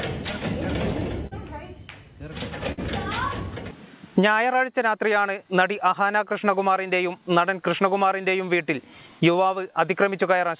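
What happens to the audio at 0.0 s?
Small, uneven timing hiccups, brief repeats, run from the very start: clock drift between sender and receiver, with the sender's clock about 3% slow, keeps draining the jitter buffer.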